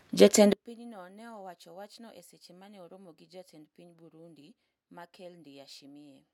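From 0.53 s to the end of the clip, the speech drops by about 28 dB and turns faint and distant, with the centred voice and background almost gone. The likely cause is one channel inverted: one side of the stereo pair carries reversed polarity, so when the two are summed to mono the shared centre content cancels. What survives is only the small difference between channels, a faint residue of the voice.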